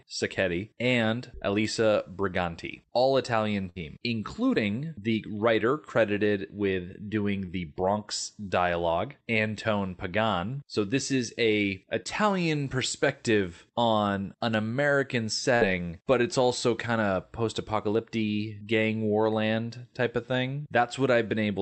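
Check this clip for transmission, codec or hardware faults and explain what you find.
Five packet-loss events break up the speech: two longer bursts and three brief concealed gaps.

Burst of packet loss at 3.69–3.79 s and 15.55–15.63 s. About 60 ms of speech went missing each time. The receiver extended the last sound for 61 ms and 57 ms, fading it down, then resumed further on. Each burst sounds like a fading buzz or hiss followed by a skip. At 3.69 s about 11 ms of extra time is added, so the speech there comes in slightly late.

Short concealed packet loss at 4.55–4.58 s, 7.46–7.51 s and 12.03–12.07 s. Each time 20 ms of audio was lost, and the decoder continued the preceding sound for 11, 18 and 25 ms before blending back. Each gap sounds like a quick smear or wobble. Near 7.46 s the fill stretches timing by about 10 ms.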